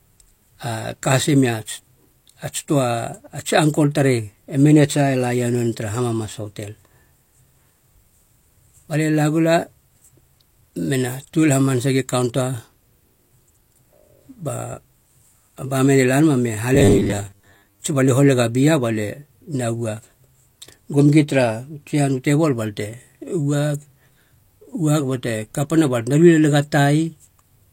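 Speech, from 16.75 to 17.81 s, between "la nama me" and "tsi balie holega", turns into a rigid metallic 100 Hz buzz: robotic sound from repeated short buffers, likely from about half the audio being replaced by repeats of a 10 ms buffer.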